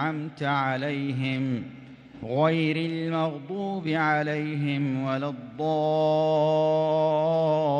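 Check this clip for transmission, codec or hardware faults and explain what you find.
No transmission, codec or hardware faults can be heard anywhere in the clip.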